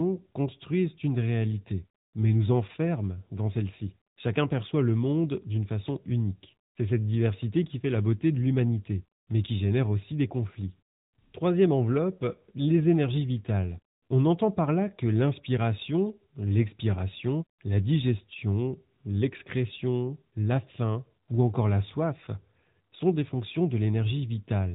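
Throughout the clip the speech carries the sound of the AMR narrowband mobile codec. Nothing above about 3.8 kHz survives, so the top end is cut off sharply. The vocal-tract model, excited by only a few pulses per sub-frame, leaves the speech plainly buzzy and synthetic, and the quality points to an AMR-NB mode around 10.2 kbps. The damage is audible from start to finish, not just in isolated passages.

At 8.35 s, right after "qui fait la beauté" and before "l'humanité mais qui génère", a bit error spike produces one sharp tick. A flipped bit pushed a sample's value up or down by a power of two, and the next sample returned to normal. The tick is broadband and has no relation to the speech around it. A second bit error spike follows at 9.31 s, just before "mais qui génère aussi", heard the same way. Its brief jump points to two adjacent corrupted samples rather than one.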